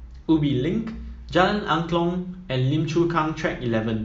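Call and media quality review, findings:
No audible faults found.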